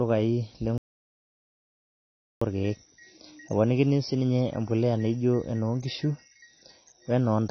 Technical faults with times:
0.00-7.51 AAC compression
0.78-2.41 audio dropout to silence

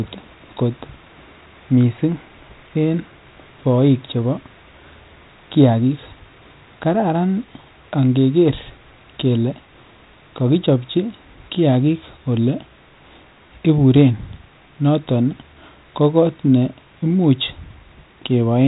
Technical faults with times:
none

